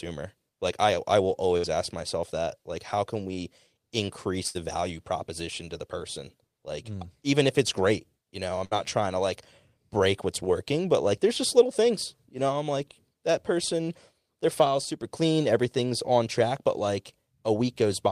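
Bursts of packet loss occur at 1.57 s after "I I will", 4.47 s after "how can we increase", and 8.65 s after "it's great you know". Each time the receiver extended the last sound for 60 to 73 ms, fading it into a brief buzz or hiss, then resumed with 60 to 80 ms of speech missing.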